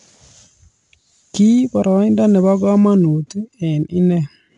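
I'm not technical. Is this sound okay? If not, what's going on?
No. The whole clip uses 4-bit ADPCM compression. Coarse sample steps add gritty hiss on louder speech, and there is nothing above 10.7 kHz, which dulls it.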